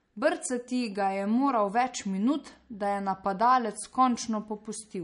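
Throughout the speech, plainly audible MP3 compression damage is present. Nothing sounds above 10.6 kHz. Weak detail flickers, giving a watery swirl. A low bitrate, around 40 kbps, is the likely cause.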